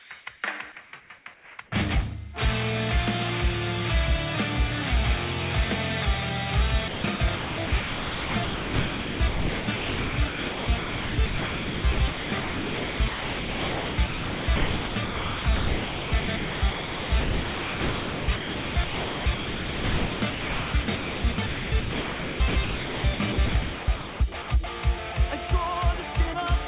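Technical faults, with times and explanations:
0.0 to 0.1 s and 0.84 to 1.58 s, comfort noise in place of the background: The real background, about 27 dB below the loud parts, gives way to a flat, featureless hiss. In the first gap it is about 3 dB quieter. The sender likely stopped transmitting when its voice detector heard nothing. The receiver then filled the pause with synthetic noise that only roughly matches the background's shape. Its detail disappears until sound resumes.
6.88 to 24.48 s, sound chopped by the voice detector: Across this stretch the detector likely switches transmission off and on repeatedly. About 14 seconds in total are replaced with generated noise. Quiet onsets and tails drop out, so the sound comes across choppy. Throughout, the audio carries nothing above 4 kHz, which fits a 64 kbps G.711 call path.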